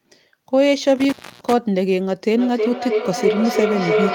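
Between 0.96 and 1.53 s a loose cable or plug loses contact. This is an intermittent contact fault: the speech drops out for about 0.27 s, with crackle where the connection breaks and remakes, and a faint hiss filling the gap while the line is open.

From 2.37 s to the end of the clip, a microphone is picking up a loudspeaker carrying the same call, and each pass around that loop adds level. This is a feedback howl: the repeats, coming roughly every 0.3 s, narrow into a tone around 400 Hz that climbs to about 0 dB relative to the speech.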